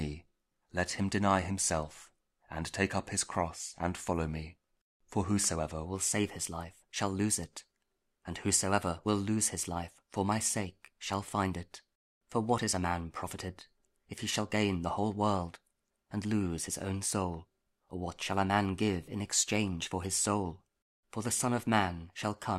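Wrong sample rate from 5.85 s to the end: the sound runs 1.09 times faster and 1.47 semitones higher, consistent with 44.1 kHz audio played at 48 kHz.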